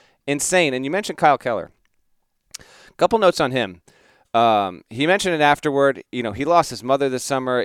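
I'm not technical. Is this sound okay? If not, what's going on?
Yes, this sound is okay, and there's nothing going on that needs fixing.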